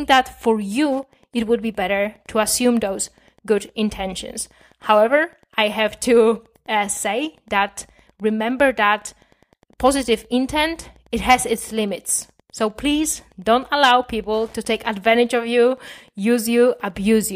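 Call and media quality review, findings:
Wi-Fi interference, whole clip. Steady faint ticking, about ten a second, sitting well under the speech. Tick spacing of 102.4 ms matches a Wi-Fi beacon; a nearby radio gets picked up and rectified somewhere in the analogue path, likely the mic preamp.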